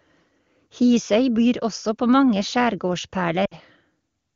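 At 3.45 s the speech loses about 60 ms to lost AMR speech frames. That fits three 20 ms frames lost in a row. Radio errors corrupted them, so the decoder reused the last good pitch and vocal tract settings. It lowered the gain with each frame. The sound smears briefly and fades toward silence. In this wideband stream the fade is quick. By 3.55 s the speech returns, weak or rough at first.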